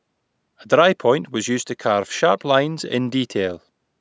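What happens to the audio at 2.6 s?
Nothing goes wrong at 2.6 s: the speech continues intact through that moment, with the call's microphone processing simply holding back the lowest bass and leaving nothing above 8 kHz, as it does normally.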